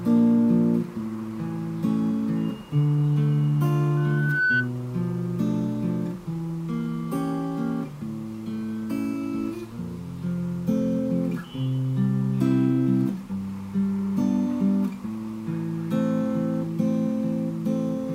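At 3.97 s a loudspeaker feedback squeal starts: a steady 1.5 kHz tone swells over about half a second until it sits a few decibels above the rest of the sound. The microphone is re-amplifying its own loudspeaker, and it stops at 4.70 s.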